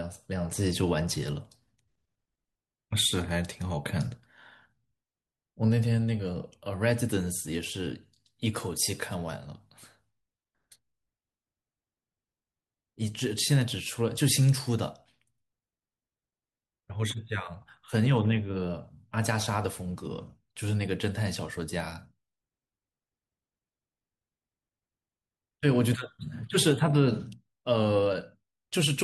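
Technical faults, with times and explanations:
Throughout: block size mismatch (truncated). A steady buzz at 46.9 Hz runs under the speech, which fits a writing stage producing 1024-sample blocks that the next stage reads only partly, discarding the tail of each one. Each cut leaves a small discontinuity at the block boundary, and these repeat at the block rate, producing the buzz. The overall speed stays at 1.0x and the pitch is normal, so very little is lost per block.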